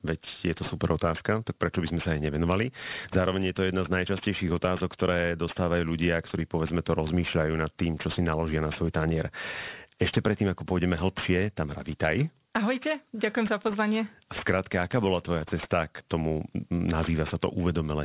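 Speech runs with aliasing from start to finish. The audio was brought down to a much lower rate, which fits a drop to 8 kHz, without removing content above half that rate first, so energy above 4 kHz folds back below it as false, unrelated tones. Sibilants come out gritty and metallic, and the spectrum stays full right up to 4 kHz, with the folded energy only about 20 dB under the speech. Simple band-limiting would instead sound dull and roll off cleanly before the edge.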